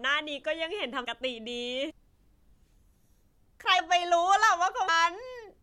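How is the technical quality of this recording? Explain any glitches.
The speech recording has four dropouts. At 1.03, 1.90, 3.78 and 4.87 s, compressed frames are skipped. Whole frames of about 26.1 ms each never play, so the speech leaps ahead, by roughly 0.4, 0.2, 0.15 and 0.7 s.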